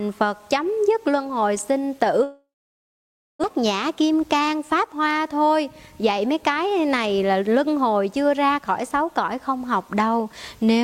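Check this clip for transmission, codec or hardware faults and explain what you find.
Two transmission faults stand out, one right after the other.

From 2.23 to 3.45 s the sound dies away. The last sound carries on as a fading buzz, then nearly a second of silence follows. It resumes with about a second missing. A long network dropout is the likely cause.

From 3.54 to 5.07 s there is a jitter buffer speed-up. The receiver trims many tiny pitch-period slices to shed roughly 150 ms of built-up delay. Playback runs about 10% fast at unchanged pitch, sounding hurried.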